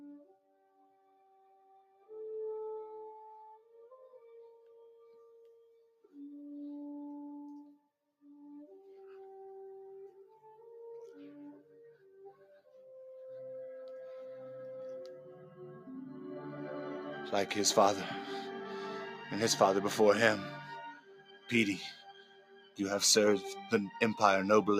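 A noise suppressor tuned for speech has been left running on this sound. It's treating the steady, sustained material as noise, so level keeps riding up and down with a swing of roughly 15 dB, and the held parts and tails sink while sharper onsets mostly punch through. The clearest spots of sound cut by the noise suppressor are 0.13–2.12 s and 3.09–6.14 s (both dipping about 18 dB), 7.78–8.25 s and 20.92–21.52 s (about 17 dB), and 21.84–22.79 s (about 18 dB). In each of these the sustain gets pulled down or its decay is clipped short.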